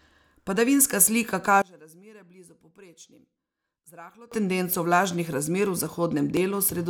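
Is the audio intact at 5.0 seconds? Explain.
Yes, at 5.0 seconds the speech plays through intact, with no dropout, click, distortion or other fault at that moment.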